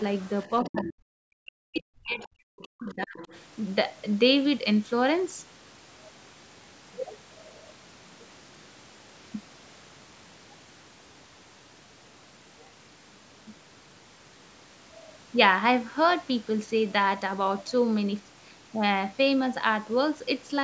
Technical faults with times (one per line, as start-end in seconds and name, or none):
0.22-0.29 other side's voice leaking through
0.63-3.18 speech suppressed in double talk
0.66-0.93 other side's voice leaking through
1.75-1.81 other side's voice leaking through
2.23-2.29 other side's voice leaking through
2.58-3.40 other side's voice leaking through